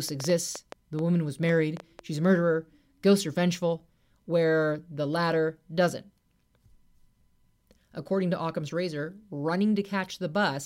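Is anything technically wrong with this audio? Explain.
Yes. From 0.09 to 2.00 s, a train of clicks ticks over the speech at an uneven pace, around five per second and somewhat louder than the voice, likely from interference or a faulty connection.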